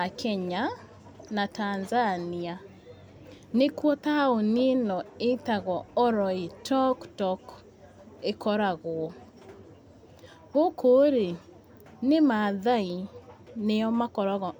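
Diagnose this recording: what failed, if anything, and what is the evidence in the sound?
Nothing failed here that I can hear: the speech comes through without any dropouts, glitches or distortion at any stage of the chain.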